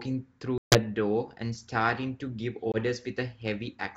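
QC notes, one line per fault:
0.58–0.80 s and 2.72–2.77 s, packet loss on an ADPCM call: two hard-edged silent holes, about 140 ms of lost audio in the first (around seven packets) and about 20 ms in the second (a single packet). Unlike a plain dropout, the speech does not resume cleanly. It returns slightly distorted and settles over some tens of milliseconds, as the decoder's predictor and step size drift back into line with the sender's.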